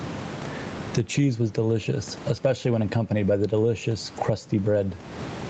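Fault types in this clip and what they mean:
Gain pumping: the level is pulled down on loud sounds, swinging about 20 dB and squeezing loud and soft parts closer together, likely from excessive gain driving a fast limiter. The waveform looks flattened; on a spectrogram the noise floor brightens between words and darkens beneath them.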